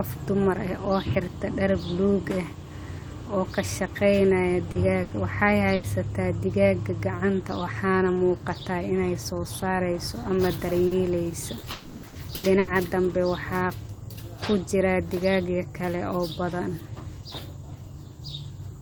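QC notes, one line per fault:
4.71 s and 10.87 s, short concealed packet loss: Each event lasts about 70 ms. The first falls just after "oo ka shaqaynaya", the second just after "ay soo saarayso ama". In each, about 40 ms of speech never arrived in time. The decoder bridged the hole by extending the last sound, using its pitch if it was voiced or shaped noise if not. It then blended back into real audio. The result is a brief smear or wobble, and a short consonant may drop out.
5.03 to 5.14 s and 5.75 to 5.86 s, burst of packet loss: The first burst also comes shortly after "oo ka shaqaynaya". Each time, about 80 ms in a row went missing, which fits a few consecutive lost packets. The receiver stretched the preceding sound and lowered its level as the gap went on. A voiced sound becomes a short held buzz, and an unvoiced one a fading hiss. Speech then picks up further along, with that 80 ms simply gone.
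11.59 to 12.70 s, repeated packet loss (robotic sound): Across this 1.1 s stretch, four separate holes were patched, the longest about 80 ms. In all, 280 ms, roughly a quarter of the span, is synthetic fill. Each patch continues the last sound, and the next loss arrives before the speech settles again. That is why it turns choppy, with fragments missing between the patched pieces.
11.71 to 12.06 s, long network dropout: This sits inside the choppy stretch. About 320 ms of audio was replaced by concealment, heard as a prolonged buzz or hiss that decays rather than true silence. The signal never falls to quiet before speech returns. The likely cause is a brief network stall that stopped audio from arriving. When sound resumes, the lost portion is skipped entirely rather than delayed.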